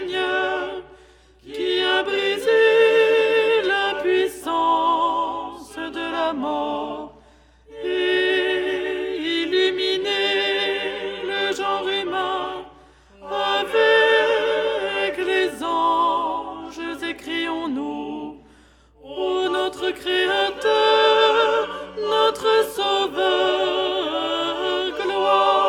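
From the first second to the very end there's a steady mains hum sitting under the sound, a low, constant drone at 60 Hz. That's the power line leaking into the signal path, typically through a ground loop between connected gear or from a transformer sitting too close to a cable or input. It's not loud, somewhere around 35 dB below the material, but it never lets up.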